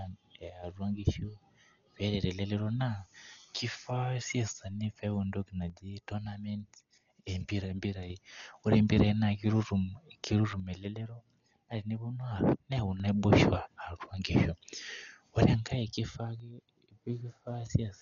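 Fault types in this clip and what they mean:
Dolby Digital compression: likely a low-bitrate AC-3 encode near 48 kbps that starved many lines of bits; the speech sounds heavily dulled, with nothing above 6.9 kHz.
One channel drops out: one stereo channel was likely lost four separate times; each time the speech abruptly falls by about 6 dB, then returns to full level.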